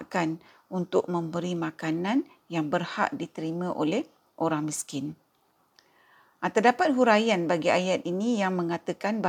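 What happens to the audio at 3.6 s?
Nothing goes wrong at 3.6 s; the speech carries on cleanly through that moment with no dropout, click, distortion or other fault.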